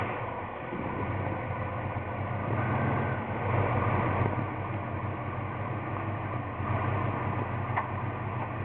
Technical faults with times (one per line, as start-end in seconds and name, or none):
none